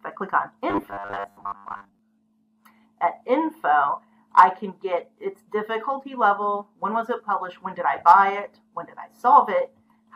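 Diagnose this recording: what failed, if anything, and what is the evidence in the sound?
Robotic sound from repeated short buffers, 0.70 to 1.99 s: the sound becomes a rigid, metallic buzz fixed at 100 Hz. That pitch matches a 10 ms block replayed over and over, likely a driver or buffer underrun, with most of that span repeated rather than new audio.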